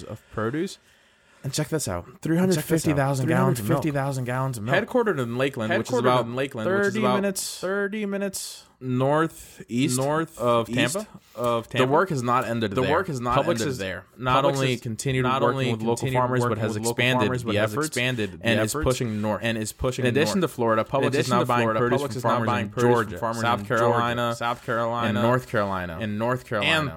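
From start to finish there's a doubled audio track: the whole speech comes back again about a second later, a few dB quieter, full-band and bone dry, with no room tail. It's likely a second capture path or an edit stacking two offset copies.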